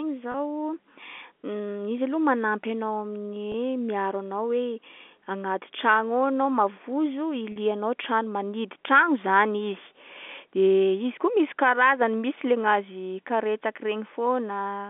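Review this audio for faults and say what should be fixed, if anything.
Packet loss with pitch repetition at 0.32 s, 3.52 s and 7.52 s: brief buzzy holds where the receiver loops the last pitch period over gaps of 20, 20 and 40 ms. Adding a bigger jitter buffer or forward error correction on the link should stop those drops.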